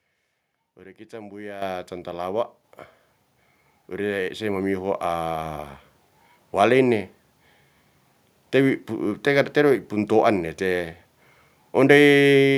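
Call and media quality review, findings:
Microphone volume stepped up at 1.62 s. Speech and room background jump together by about 10 dB in one step. Probable component: call client's automatic input gain control. Mechanism: the software judged the capture level too low and raised the device's input volume at once instead of ramping it.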